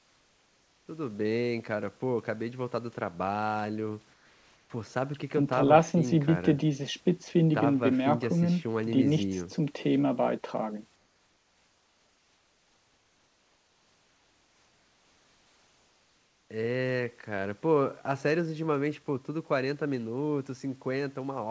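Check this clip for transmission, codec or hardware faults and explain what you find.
One fault shows up: comfort noise in place of the background, at 0.00 to 0.88 s, 4.14 to 4.70 s and 10.96 to 16.50 s. In those pauses the room tone turns flat and featureless and drops by about 3, 2 and 4 dB, likely because discontinuous transmission stopped sending and the receiver filled the gap with synthetic noise. Nothing comes through above 8 kHz, which fits a wideband call codec such as G.722.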